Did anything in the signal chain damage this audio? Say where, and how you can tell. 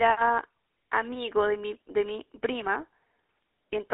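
Yes. The whole clip has a buzzy, gravelly roughness, and the speech sits in a narrow band of about 300 Hz to 3.7 kHz with nothing above. This comes from the GSM full-rate codec at the codec stage. It rebuilds the voice from a vocal-tract model driven by sparse, regularly spaced pulses, which fits a 13 kbps full-rate stream.

From 2.80 to 2.84 s there is a short squawking, gargled break in the speech. These are GSM bit errors from the network stage. Flipped bits on a weak radio link reached the speech decoder and corrupted its filter, pitch or gain values, which is consistent with two damaged frames.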